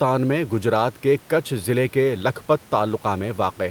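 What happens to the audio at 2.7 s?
Nothing goes wrong at 2.7 s; the speech continues intact, with only the faint room noise of the recording space sitting about 29 dB beneath it.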